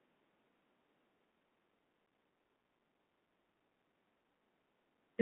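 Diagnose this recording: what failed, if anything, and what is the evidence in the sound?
The codec stage shows a Bluetooth CVSD headset codec throughout: speech confined to 200 Hz–3.4 kHz, scratchy sibilants and granular hiss, fitting a 64 kbps link. A spectrogram shows nothing above 3.4 kHz.

The radio link shows unconcealed Bluetooth headset packet loss at 2.06 s: an 11 ms hole with abrupt edges where a few packets went missing. The waveform shows a flat gap and vertical edges.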